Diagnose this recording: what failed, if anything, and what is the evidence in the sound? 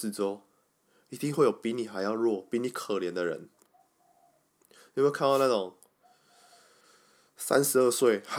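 The wireless microphone noise hit at 5.27 to 5.50 s is a quarter-second burst of static over the speech, from the analogue radio link fading as reflections cancel.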